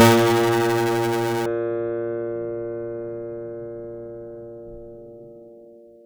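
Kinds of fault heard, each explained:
Buffer tearing: write and read pointers slipped, so nearly half of each period replays slightly older music, giving a 345 Hz buzz through the first 1.46 s.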